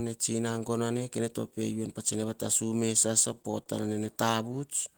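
From 3.35 to 3.68 s the speech stutters. These are repeated stalls: packets arrived late, and the jitter buffer ran dry four times. Each gap, the longest 28 ms, was bridged by stretching the last sound. Nothing is lost, but the passage drags.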